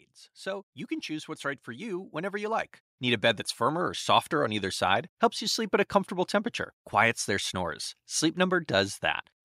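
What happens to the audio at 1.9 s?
At 1.9 s the clip is partway through an automatic gain rising that runs from 0.43 to 4.85 s. The gain control judged the input too quiet and stepped its gain up gradually, by about 12 dB in all, so speech and background swell together.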